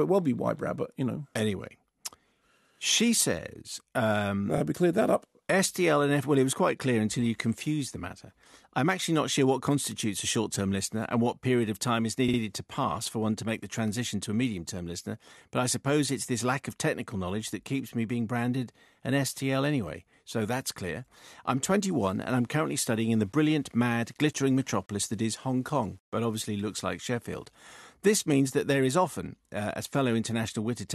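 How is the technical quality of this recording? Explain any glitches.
The recording has two faults: a brief stutter partway through and a stretch of grainy distortion later on.

Repeated frames, 12.28 to 12.39 s, just after "period of time is" and before "to pass for one": a short run of compressed audio was sent or written twice more than it should have been. The decoder therefore replayed the same slice of speech, and the repeated block fits two frames of about 52 ms each. It is heard as a quick stutter, and it adds about 0.1 s to the recording.

Low bit depth without dither, 21.86 to 27.50 s, starting after "so that's clear I'm": the samples were likely rounded to too few levels with no dither added, which is consistent with roughly 9-bit resolution. Without dither, the rounding error follows the waveform and becomes distortion instead of a steady hiss. Quieter syllables and word endings turn gritty and sputtery. 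The noise sits around 40 dB below the speech and shifts in character as the speech changes.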